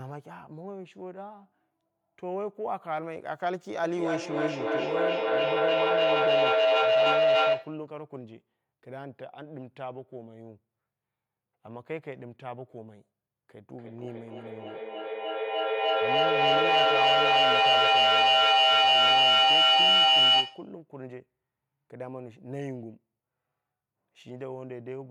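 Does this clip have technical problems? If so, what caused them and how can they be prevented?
Yes. Feedback howl at 3.84–7.89 s (near 700 Hz) and 13.74–20.77 s (near 3 kHz) comes from two devices in one room looping sound between microphone and loudspeaker. Each trip adds gain, so the sound swells to about 11 and 13 dB above the speech, pulsing roughly every third of a second. Muting or removing the second device, or using headphones, prevents it.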